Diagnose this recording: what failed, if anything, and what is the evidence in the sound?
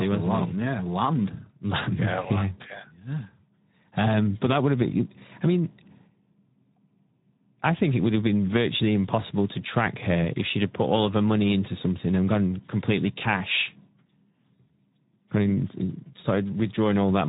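The codec stage is the culprit: Speex coding runs through the whole speech clip. The voice sounds hoarse and noisy, and nothing survives above 3.8 kHz, which fits a narrowband mode at around 11 kbps. The CELP coder has too few bits for the excitation, so that's where the roughness comes from.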